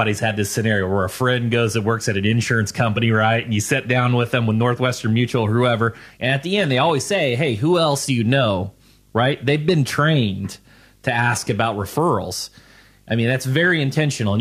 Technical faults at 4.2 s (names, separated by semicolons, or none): video or display buzz